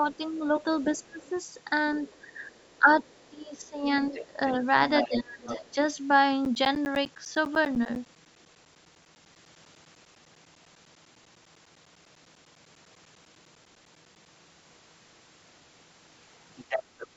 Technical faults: speech suppressed in double talk; other side's voice leaking through; periodic USB or driver dropouts

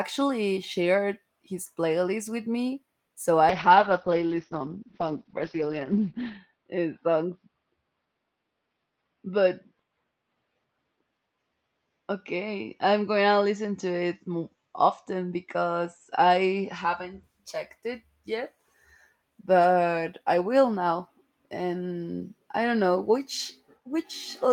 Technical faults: call bitrate drop

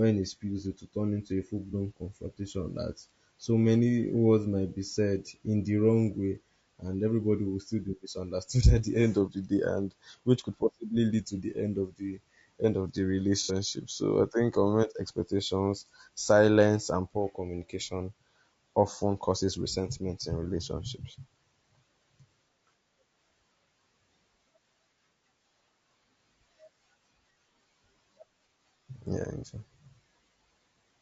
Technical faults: low-delay AAC compression; AAC frame loss with concealment

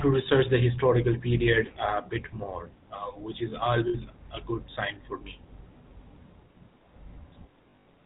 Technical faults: GSM full-rate codec; lost GSM frames

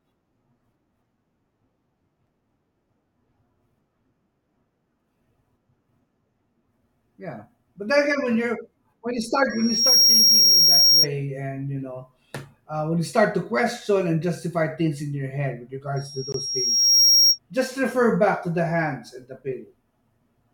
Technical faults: block of digital silence; loudspeaker feedback squeal

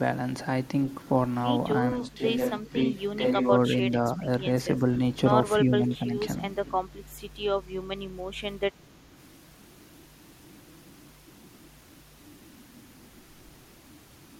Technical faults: switch to a distant microphone; speech suppressed in double talk

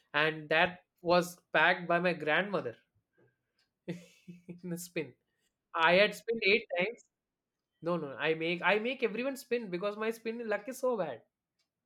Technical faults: none

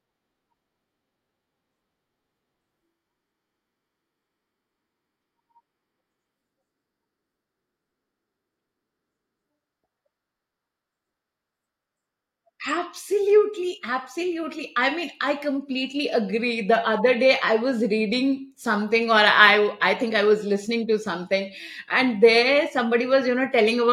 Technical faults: none

